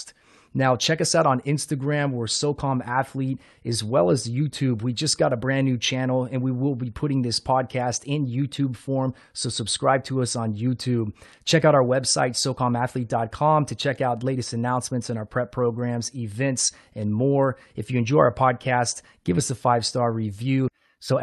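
No technical faults are audible.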